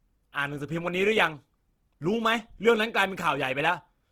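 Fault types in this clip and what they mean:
Opus compression: The speech sounds grainy, rough and noisy throughout. The cause is likely Opus in its music mode, filling starved bands with folded or noise content. The damage is plainly audible, the full bandwidth remains, and it fits a rate near 16 kbps.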